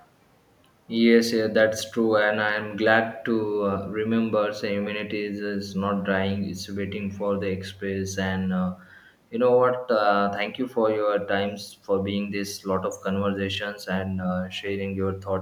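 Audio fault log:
No faults heard anywhere in the speech.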